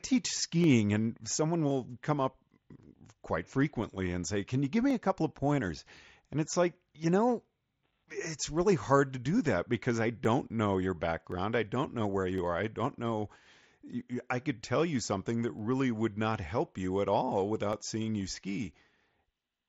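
From 0.64 s to 18.8 s a click recurs every 1.07 s, about twenty in all, most likely clock drift buffer slips: two devices whose clocks disagree by a few hundred parts per million let the buffer creep until roughly 15 samples are dropped or repeated. On a waveform each slip shows as a tiny step discontinuity; on a spectrogram, as vertical lines at an even spacing, extending up to the 7.7 kHz ceiling set by the mSBC headset link.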